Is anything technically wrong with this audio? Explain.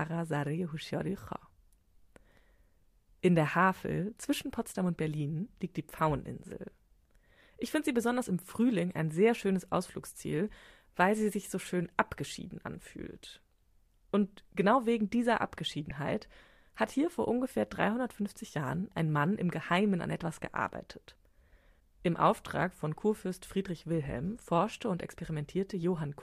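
Yes, there are two spots where a corrupt frame was decoded. The first runs from about 5.97 to 6.00 s and the second hits at 15.90 s, each spanning a couple of frames. Flipped bits in the compressed data gave the decoder wrong gains or misread codes, and it played the frames anyway, putting energy at the wrong frequencies. You hear a short chirpy blip, faint at around -40 dBFS the first time and much louder, near -20 dBFS, the second.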